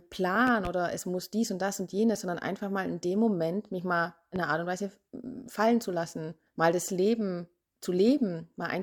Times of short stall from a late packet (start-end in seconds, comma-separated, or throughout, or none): none